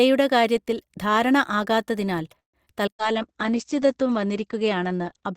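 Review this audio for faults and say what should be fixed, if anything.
Repeated packet loss (robotic sound) runs from 2.39 to 3.02 s, right after "കാര്യത്തിൽ ധാരണ ആകാത്തതിനാൽ". Several holes are patched by stretching earlier sound. The longest is 141 ms. Strengthen loss protection, such as FEC, on the network path.

A call bitrate drop starts at 2.94 s and lasts to the end. The top end falls from 20 kHz to 8 kHz, which fits an encoder cut to about 10 kbps. The sound turns coarse and muffled. Give bandwidth estimation more headroom so the encoder isn't starved.

A jitter buffer slow-down runs from 3.01 to 4.09 s. Repeated pitch periods add 73 ms, so playback runs at 94% speed with drawn-out sounds. Keep a steadier buffer target to avoid sudden refills.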